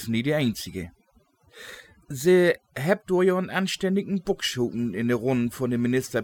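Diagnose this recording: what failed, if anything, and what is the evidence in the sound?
The failure is overdone noise removal in the processing stage, and it runs through the whole clip. The gaps between phrases drop to near silence with little twinkling specks. The suppressor is set so hard that it guts any band sitting near its noise estimate, quiet speech detail included.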